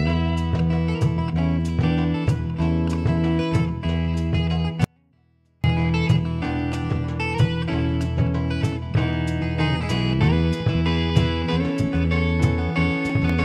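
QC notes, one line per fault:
4.84–5.64 s, audio dropout to a faint residue: the sound cuts out abruptly for about 0.8 s, leaving only a faint trace roughly 40 dB below normal, then snaps back. Likely a brief signal loss upstream while the rest of the chain stayed live.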